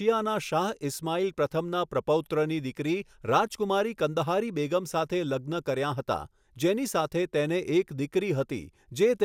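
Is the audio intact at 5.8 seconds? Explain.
Yes, the audio at 5.8 seconds is intact, with no dropout, click, distortion or other audible fault at that point.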